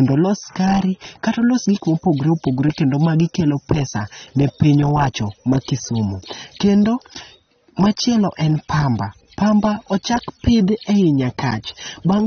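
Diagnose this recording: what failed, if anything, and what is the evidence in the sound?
Codec stage throughout: the speech sounds dull and smeared, with nothing above 6.3 kHz. That points to likely AAC compression at around 24 kbps.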